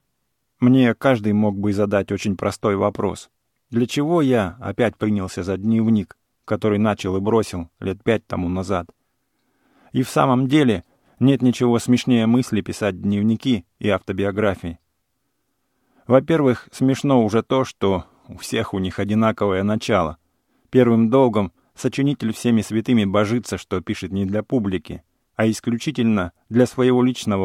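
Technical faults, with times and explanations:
No technical faults can be heard in the recording.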